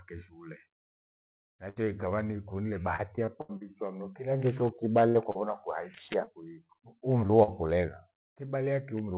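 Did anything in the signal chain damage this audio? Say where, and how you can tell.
Yes, network packet loss: a burst of packet loss at 1.70–1.78 s and 5.09–5.17 s. About 60 ms is continued and faded, shown as a smooth, decaying patch on the spectrogram before speech resumes further on.

Repeated packet loss (robotic sound) from 2.96 to 3.63 s: five gaps, the longest 76 ms, cover about a quarter of the span. The waveform shows repeated smooth patches, heard as choppy.

Short concealed packet loss at 5.31, 6.25, 6.67, 7.27 and 7.43 s, 20 to 40 ms each: brief smears where the harmonics flatten for a moment, within the call path's 4 kHz band.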